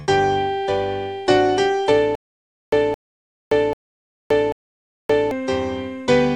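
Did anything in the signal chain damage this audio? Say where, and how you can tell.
Yes. The damage sits at the playback or streaming buffer stage. From 2.15 s to 5.31 s there is a stutter with silent gaps. A burst of about 217 ms plays, then about 573 ms of dead digital silence follows. The pattern returns every 790 ms, four times in all. The steady timing points to a stall. The likely cause is a starved buffer that replays its last fragment at each retry and then runs dry. The audio meant for that span is gone.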